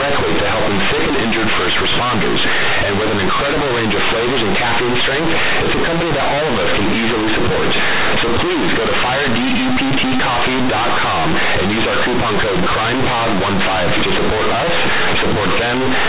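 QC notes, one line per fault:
Throughout, companded audio read as linear: mu-law telephone bytes are played as plain 8-bit samples without expansion, so each sign change swings across about half the range. Unlike clipping, pauses and quiet passages become as loud and buzzy as the speech, with harsh noise filling the gaps.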